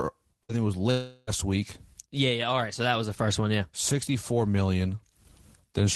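Early in this speech clip, from 0.43 to 0.52 s, the sound briefly smears into a short held buzz or fading hiss before resuming with a fragment gone. This is a burst of packet loss: the receiver stretched the last audio across roughly 55 ms and skipped about 60 ms. A longer stretch follows from 0.91 to 1.3 s, where the sound decays into a fading buzz or hiss for about 360 ms and never falls fully silent. It then picks up later with that span missing, most likely a long network dropout. Throughout, the audio carries the call codec's coding noise and the high end stops around 12 kHz.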